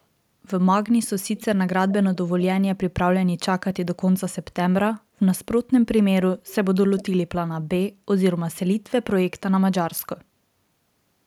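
Speech, with a short echo leak at 6.99 to 7.04 s. For about 50 ms a faint delayed copy of the talker sneaks back in, trailing the original by around 400 ms and sitting well below it, roughly 20 dB down. That points to a far end on a loudspeaker whose echo canceller likely didn't fully scrub what its mic picked up, so a residual scrap of the voice got sent back down the line.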